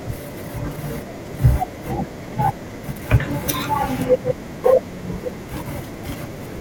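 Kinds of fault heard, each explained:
DAB burbling: bit errors from weak digital radio reception slip past error correction into the MP2 audio data, so wrong samples put short blips of noise in single sub-bands and wrong scale factors make sub-bands jump in level for up to a frame. From 1.85 to 2.04 s the speech picks up short blips of noise, which points to around ten corrupted frames at a bit error rate of about 0.15%. A spectrogram shows isolated frame-wide rectangular patches in narrow bands, and the waveform shows brief, uneven level spikes.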